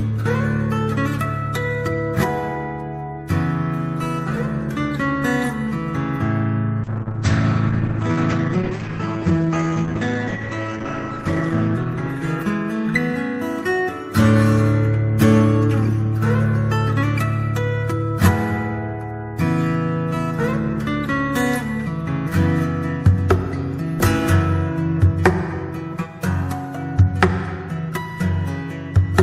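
Call bitrate drop, 6.85 to 13.29 s: the starved encoder codes coarsely and removes everything above 8 kHz, so the sound turns rough, watery and muffled.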